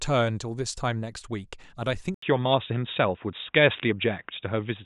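At 2.14 s the speech turns dull and boxy after an 80 ms gap, with nothing above 3.7 kHz, a level shift of a few decibels and faint new background noise, likely from the input switching to a poorer device.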